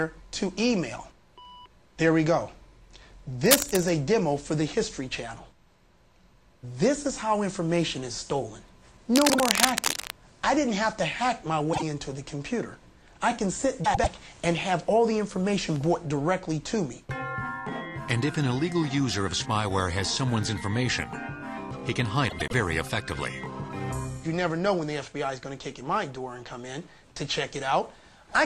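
A worn cable, connector or control, likely moved, causes cable scratch noise from 3.46 to 3.89 s and 9.13 to 10.10 s. Its contact resistance keeps changing, giving uneven scratching bursts about as loud as the sound itself. During the second burst, two neighbouring blocks of frames were decoded in swapped order. These frames out of order recur at 9.28 to 9.40 s with 48 ms blocks, 11.73 to 11.83 s with 24 ms blocks, and 13.84 to 14.07 s and 22.29 to 22.53 s with 96 ms blocks. Each stretch plays its halves exchanged, a garbled flutter, without losing time.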